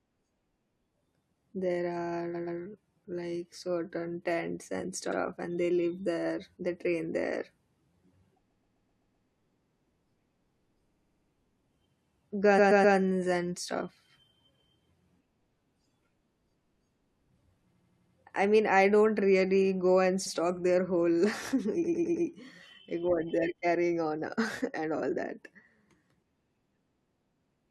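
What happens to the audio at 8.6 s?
The speech stutters from 8.50 to 9.27 s. These are repeated frames: 128 ms blocks of compressed audio replay, stretching the clip by 0.77 s.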